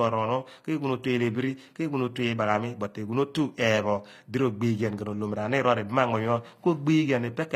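HE-AAC compression is audible throughout the speech, most likely the cause: only the lower band is coded, and the treble is rebuilt by copying it upward, so sibilants turn gritty and lispy with a metallic edge, which fits a low bitrate near 24 kbps.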